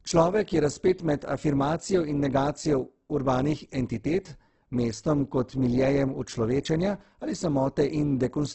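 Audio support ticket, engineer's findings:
Speech grainy, rough and noisy for the whole clip, with nothing above 8.2 kHz. Likely Opus compression in CELT mode at a low rate, fitting roughly 12 kbps. Starved bands are refilled with folded or noise content. On a spectrogram, a hard ceiling at 8.2 kHz and speckled, smeared harmonics.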